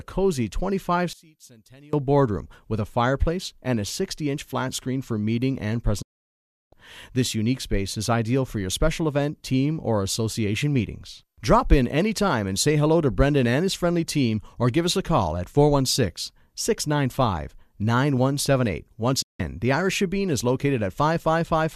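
From 1.13 to 1.93 s, just before "boardroom with a fireplace", the speech drops by about 26 dB and turns faint, with the centred voice almost gone. The likely cause is one channel inverted: with one side's polarity reversed, the material the two channels share cancels when they are summed to mono. Unlike a dropout, the sound never goes fully silent. A faint difference signal keeps running underneath.

At 6.02 s, right after "screen for meeting and", the audio fades out over about 8 ms into complete silence and stays gone until 6.73 s, a hole of roughly 0.7 s. A second, shorter hole follows from 19.22 to 19.40 s, lasting 168 ms. These are digital broadcast dropouts. The receiver lost valid frames and muted until clean data returned. What tells them apart from the inversion is the true silence and the missing content: nothing leaks through.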